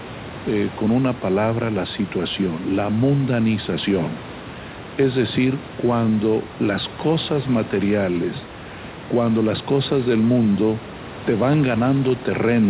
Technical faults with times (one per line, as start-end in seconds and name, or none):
none